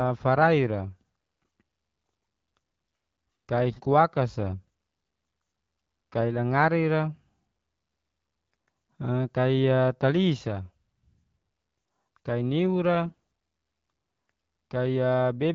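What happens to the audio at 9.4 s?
Nothing goes wrong at 9.4 s: the speech carries on intact through that moment, with only the light coloration of the AMR wideband (HD Voice) codec at 12.65 kbit/s that runs throughout.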